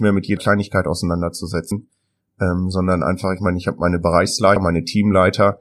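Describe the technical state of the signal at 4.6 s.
At 4.56 s, just after "meine ich habe meine", the decoder skips compressed frames. A run of whole frames never reaches the output, either because they are missing from the stream or because they were rejected as corrupt. The jump is around 150 ms, roughly four frames, which points to a 32 ms frame length. The speech leaps abruptly forward.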